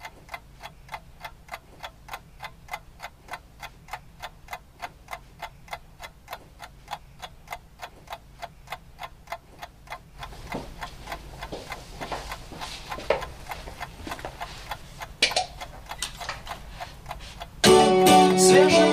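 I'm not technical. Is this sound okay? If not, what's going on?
Yes, nothing in this recording points to a technical problem with how it was captured or played back.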